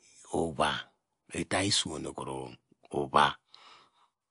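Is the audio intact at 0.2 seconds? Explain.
No. At 0.2 s, as throughout the clip, the speech sounds watery and swirly with nothing above 10.6 kHz, likely MP3 compression starving bits, which fits a bitrate near 48 kbps.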